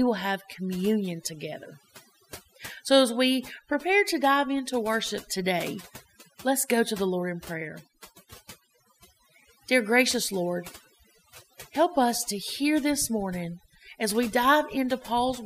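A spoken recording that's had overdone noise removal applied from start to finish. The noise reducer was pushed too hard, so any frequency band sitting close to its idea of the background gets pulled way down or switched off. The room noise drops and breaks up into little twinkling specks, and the softer parts of the voice get carved away too.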